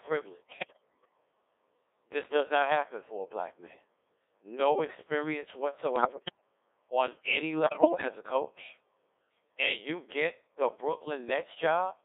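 Throughout, a Codec 2 vocoder replaces the waveform with synthesised sine waves from pitch and envelope data, in what sounds like its 1.6 kbit/s mode, leaving speech heavily robotic and buzzy within roughly 300 Hz to 3.6 kHz. Bit errors on digital voice radio, around 7 percent from 0.57 to 1.09 s and around 10 percent from 5.96 to 6.41 s and 7.64 to 8.08 s, corrupt the vocoder's frame parameters, so the voice lurches in pitch and level and breaks into warbles and bleeps.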